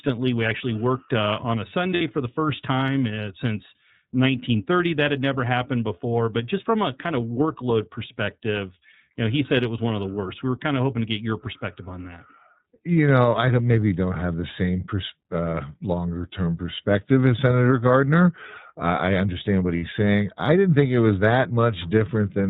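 The whole clip runs through the iLBC codec, and you can hear it plainly. Everything is squeezed into narrowband, so nothing above 4 kHz survives, and the speech has that slightly rough, synthetic edge. The character fits iLBC's 30 ms frame mode at around 13.33 kbps. Each frame's excitation is coded on its own.

Then there are two spots of lost iLBC frames. The first is at about 1.94 s, right after "worked uh on a" and before "for the first time". The second is at about 19.77 s, between "I understand what" and "saying I didn't think". Each gap is roughly 60 ms, which points to two 30 ms frames going missing. The decoder fills the hole by repeating the last pitch cycle with some noise mixed in, so you get a brief held, buzzy-breathy vowel. Because iLBC frames don't depend on each other, the speech snaps back cleanly right after.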